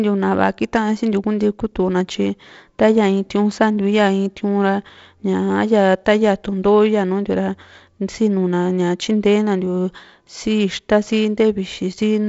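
Nothing goes wrong in this speech clip; it simply carries the expected sound of G.722 wideband telephone coding at 48 kbit/s, with a light grain from the codec and nothing above about 7.7 kHz.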